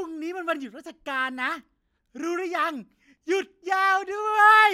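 No technical faults can be heard anywhere in the speech, with the signal holding steady and continuous for its whole duration.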